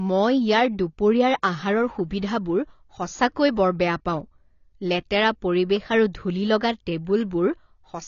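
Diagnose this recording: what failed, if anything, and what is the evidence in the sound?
The failure is at the codec stage, and it runs throughout the speech. Nothing is present above 6.9 kHz, and the coding damage is plainly audible. This is likely AAC compression at a low bitrate, which fits about 24 kbps. The encoder lowered its cut-off and discarded high-frequency detail.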